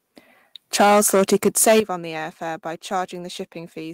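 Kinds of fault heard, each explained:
Microphone overload: From 0.74 to 1.8 s the loudest peaks get flattened and crackle harshly, likely an input pushed about 10 dB too hot, clipping a fair chunk of samples.
Microphone volume stepped down: At 1.8 s, right before "on the air fare", everything drops about 11 dB at once, likely the software cutting the mic's input gain.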